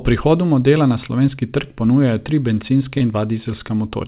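From 2.98 to 3.03 s there is a short concealed packet loss: a few tens of milliseconds of speech arrived too late, and the receiver bridged the gap by extending the preceding sound before blending back in. It is heard as a brief smear in narrowband speech with nothing above 4 kHz, consistent with a G.711 call path.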